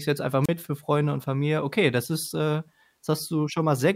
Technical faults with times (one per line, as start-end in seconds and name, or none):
0.44-0.49 wireless microphone squelch dropout